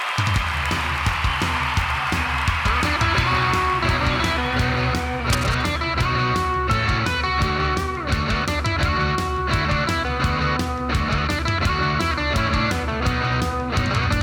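A single burst of cable scratch noise runs from 5.33 s to 5.74 s, lasting about 0.4 s. It is a dense, uneven crackle and rustle sitting over the audio at roughly 10 dB below the signal. The likely cause is a worn cable, connector or control being moved. Its contact resistance then fluctuates rapidly, and the resulting current variations appear as irregular noise bursts in the signal path for as long as the part is disturbed.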